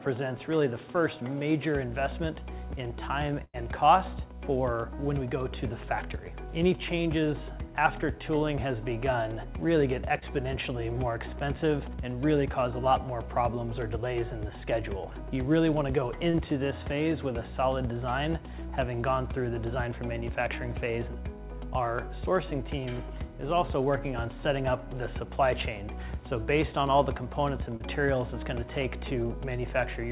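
At 3.44 to 3.57 s there is a burst of packet loss: about 95 ms of the signal is extended and faded as a held buzz or hiss, and roughly 90 ms of audio is skipped. At 10.19, 16.31 and 27.77 s, short concealed packet loss of about 30 ms each is patched by extrapolation, giving brief smears or wobbles through narrowband audio with nothing above 4 kHz.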